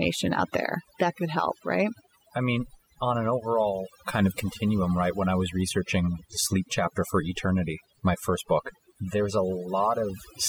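From start to finish, the pauses between phrases fall to near silence dotted with twinkling specks. This is overdone noise removal: a noise reduction stage set far too aggressively pulls individual frequency bands down or shuts them off whenever they sit close to its noise estimate, stripping away the quieter parts of the voice along with the noise.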